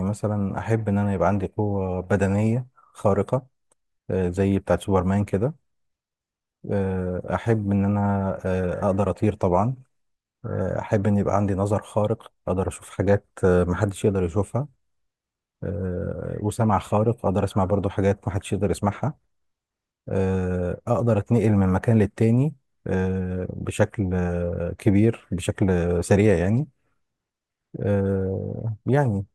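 No fault can be heard anywhere in the recording; the speech holds steady from first moment to last with no dropout, click, distortion or level jump.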